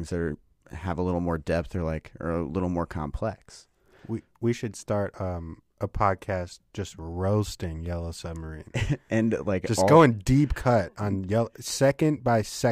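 No technical faults can be heard anywhere in the speech.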